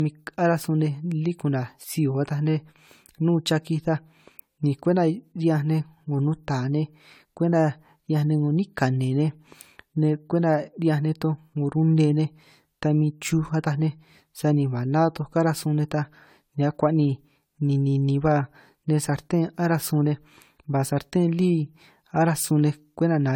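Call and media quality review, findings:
Generation loss throughout: swirly, hollow speech with smeared onsets despite bandwidth to 19.9 kHz, unlike a single low-bitrate encode; likely about seven AAC-LC passes at roughly 96 kbit/s.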